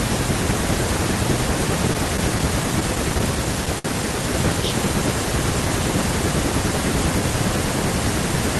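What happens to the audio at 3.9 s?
A short stall from a late packet occurs just before that point, from 3.79 to 3.86 s. A packet arrived late and the jitter buffer ran dry. The receiver stretched the last sound for about 59 ms, then resumed where it left off. Nothing is lost, but that instant is held too long.

A mains buzz also runs underneath, as it does through the whole clip. It is a steady, raspy 60 Hz buzz with harmonics reaching up to several kilohertz, about 35 dB below the speech. It comes from sharp switching spikes entering the signal twice per mains cycle.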